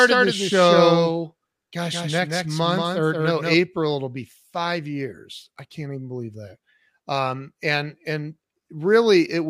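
A second capture path or an out-of-step edit has likely mixed this speech in twice: a dry, full-band copy trails roughly 200 ms behind, around 5 dB quieter, giving a doubled track from the very start until it cuts off abruptly at 3.54 s.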